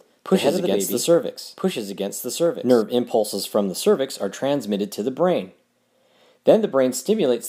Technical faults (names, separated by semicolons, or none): doubled audio track